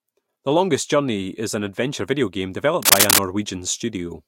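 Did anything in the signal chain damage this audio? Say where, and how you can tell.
Yes. Right after "an adventure video game", from 2.82 to 3.19 s, a burst of dense, uneven scratching noise sits around 10 dB above the speech. This cable scratch noise points to the analogue wiring: most likely a worn cable or connector carrying DC was moved, its contact resistance fluctuating rapidly.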